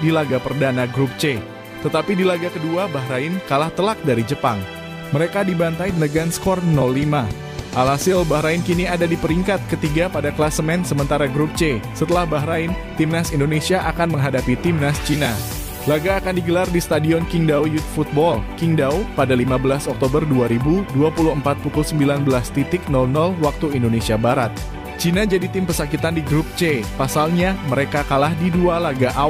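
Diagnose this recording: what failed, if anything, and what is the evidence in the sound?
Nothing failed, and the sound carries no evidence of a fault at any stage.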